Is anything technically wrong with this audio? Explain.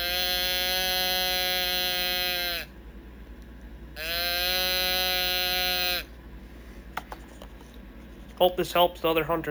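Yes. Imaging from sample-and-hold upsampling runs through the whole clip. The sound points to a rise from 16 kHz to 48 kHz, with each sample simply repeated and no smoothing filter. That leaves mirror copies of the spectrum above the original band. The first copy sits between 8 and 16 kHz, about 11 dB below the signal. It adds a bright, metallic fizz that rises and falls with the sound, and its lowest part moves against the pitch.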